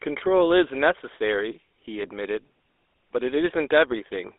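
From start to finish the speech carries the GSM full-rate codec's buzzy, gravelly roughness, with the band held between 300 Hz and 3.6 kHz, which fits the 13 kbps full-rate codec. The grit comes from a coarse pulse excitation, not from added noise or plain low-passing.

At 2.02 s, lost GSM frames cause a brief rough, metallic ring lasting until about 2.10 s. Concealment repeats the last good frame's settings, which fits a single lost 20 ms frame. This replacement ring, unlike a dropout's silent gap or click, keeps sound going through the loss.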